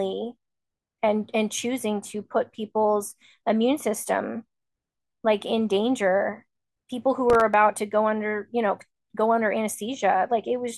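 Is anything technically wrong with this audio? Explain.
Yes. From 7.3 to 7.54 s the speech carries a burst of processor overload crackle. The processor repeatedly failed to deliver its very short audio buffers, each around a millisecond and a half, in time, and each missed buffer played out as silence. About seven of these tiny hard-edged dropouts produce a gritty, tearing crackle. On the waveform, the signal shows brief notches of near-silence. On the spectrogram, the same stretch shows thin vertical broadband streaks.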